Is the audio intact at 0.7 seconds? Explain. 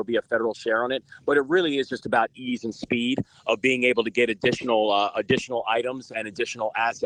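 Yes, the audio is intact at 0.7 seconds, with no dropout, click, distortion or other fault at that point.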